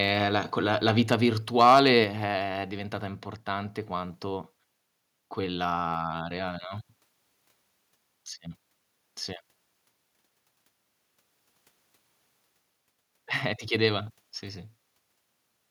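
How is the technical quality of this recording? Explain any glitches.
The recording has two related problems close together: a stretch of overload distortion on a loud passage, followed shortly by a sudden drop in level.

Microphone overload, from 1.59 to 1.80 s, right after "la quella la vita": the input was driven about 5 dB beyond what the converter could represent, so the tops of the waveform were likely flattened off, affecting a few percent of the samples in that stretch. This adds a crackling, distorted edge to the loudest moments. Unlike a codec artefact or dropout, the damage follows the loudness itself, appearing only where the signal peaks and leaving the quieter parts of the same passage intact.

Microphone volume stepped down, at 2.04 s, just before "è diventata importante quanto": both the speech and the background drop by about 5 dB in a single step, most likely because the call software reacted to the overload a moment earlier by lowering the device's input volume. 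What tells this apart from a fade or a compressor pumping is that the change is instant and then holds, with no recovery afterwards. The speech from that point on is simply quieter.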